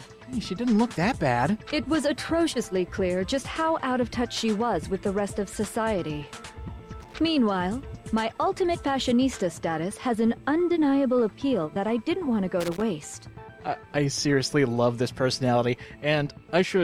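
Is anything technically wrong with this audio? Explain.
Yes, loose connector crackle at 7.00–7.15 s and 12.60–12.82 s: a worn contact intermittently breaks, chopping the signal, heard as brief irregular scratchy bursts.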